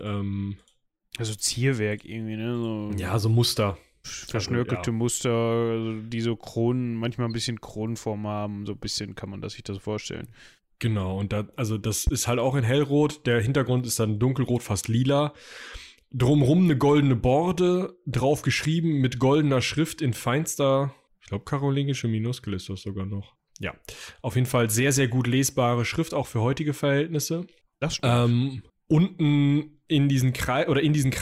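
A loud pop hits at 12.07 to 12.10 s, between "und da also das" and "halt auch in hellrot". It is a single sharp pulse about 10 dB above the speech, which carries on underneath. The likely cause is a sudden voltage spike from a switch, plug or static discharge.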